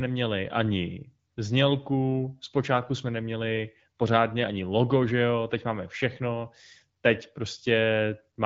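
Nothing here sounds like a fault, and the speech has the light, 7 kHz-wide quality you'd expect from the AMR wideband (HD Voice) codec at a rate like 12.65 kbit/s.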